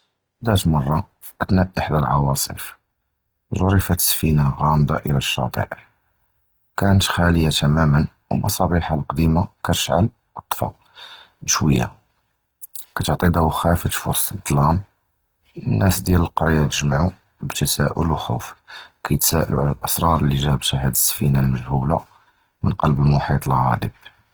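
Throughout, the speech likely went through Opus compression starved of bits, fitting roughly 16 kbps, so bands refilled with noise leave it plainly grainy and rough.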